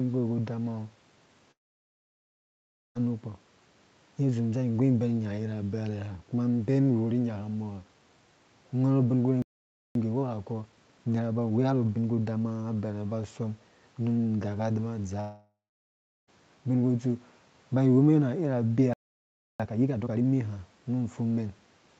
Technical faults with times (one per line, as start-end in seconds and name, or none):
1.51-2.97 long network dropout
9.42-9.95 playback stall
9.95-12.95 time-compressed catch-up
15.20-16.29 long network dropout
18.93-19.60 playback stall
19.60-20.26 time-compressed catch-up